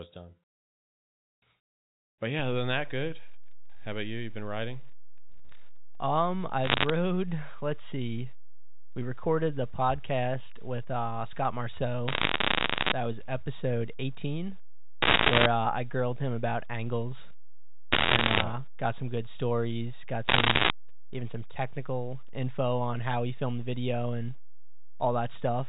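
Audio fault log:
2.39 s to end: DC step. The waveform's zero line jumps at 2.39 s and stays offset for the rest of the clip. The sudden shift in baseline is heard as a single low thump at that moment, while the speech carries on unchanged.
6.64–6.90 s, 12.08–12.92 s, 15.02–15.46 s, 17.92–18.44 s, 20.28–20.70 s: bit errors on a digital phone line. Flipped bits on the 8-bit logarithmic G.711 line corrupt single samples. Hits on sign or high bits jump far from the waveform, giving sharp ticks that cluster into crackle over the speech. The densest burst is at 15.02 s, with roughly a few percent of bits wrong.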